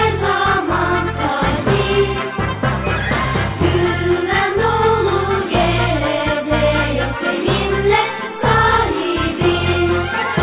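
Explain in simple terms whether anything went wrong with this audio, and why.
Nothing went wrong here; listening closely, there's no glitch, dropout or other technical problem anywhere in the recording.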